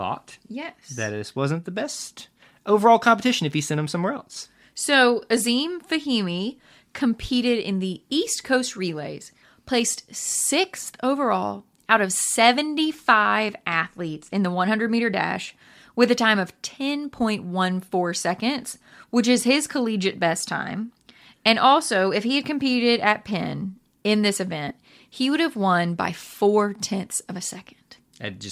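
Lost LE Audio frames at 24.69 s, between "in this" and "he would have won": about 15 ms of the Bluetooth LE Audio stream never arrived, which fits two missing LC3 frames. To fill the gap, the decoder repeated the last good spectrum with its signs randomised. For that instant, the speech becomes a brief noisy smear rather than a clean gap. The light lossy compression across the clip adds at most a faint watery texture.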